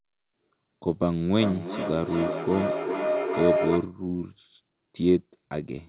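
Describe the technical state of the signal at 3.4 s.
At 3.4 s you're right in the middle of a feedback howl (1.35 to 3.98 s). Two devices on the same call in one room keep re-amplifying each other. That gives a ringing tone around 700 Hz, with the loop repeating roughly every 0.4 s and the howl peaking only about 2 dB below the speech.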